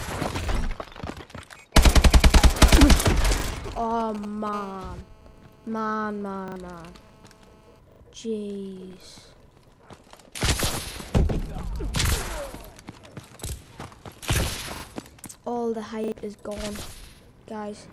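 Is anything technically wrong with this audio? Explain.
Yes, three kinds of fault are audible.

Repeated buffer: at 0.44, 3.40, 6.48, 7.92, 12.08, 14.76 and 16.04 s a 40 ms slice of sound plays again, once in the first, second and fifth cases and twice in the others, giving a stuttering jolt with hard joins. Fresh audio arrived late, so the device replayed its last buffer, and a few tens of milliseconds of real sound are lost each time.

GSM signalling bursts: from 2.59 to 4.49 s a galloping dit-dit-dit of short 217 Hz buzzes sits about 15 dB below the sound. A nearby 2G phone was exchanging short radio bursts with the network, and the audio circuitry rectified them.

GSM phone buzz: from 4.53 to 7.79 s a steady, raspy 217 Hz buzz rich in harmonics runs underneath, about 28 dB down and unrelated to the audio. It comes from a 2G phone in an active call transmitting in bursts 217 times per second.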